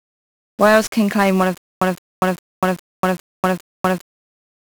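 From the very start, the speech is smothered by 1-bit DFPWM compression. Each sample gets just one bit nudging an adaptive level up or down, which fits a 48 kbps stream. The damage is heavy: fuzzy, crackly, and the top end is lost in hiss.

Then, from 1.58 to 4.01 s, you get a stutter with silent gaps. A 167 ms fragment plays six times, each followed by about 239 ms of dead digital silence, so it repeats every 406 ms. It's likely a stalled stream replaying its last chunk, and whatever should have played there is gone.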